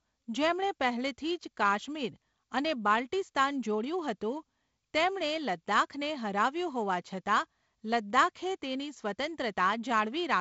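No technical faults are audible.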